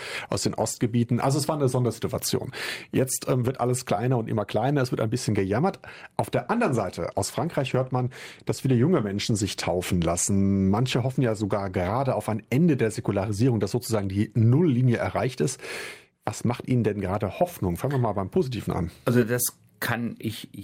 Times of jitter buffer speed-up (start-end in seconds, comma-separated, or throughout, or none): none